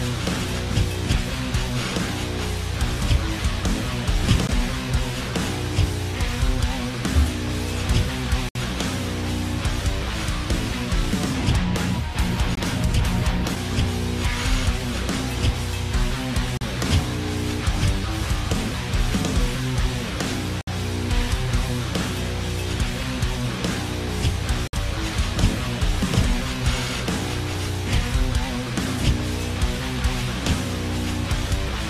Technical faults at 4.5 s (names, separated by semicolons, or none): gap between stream segments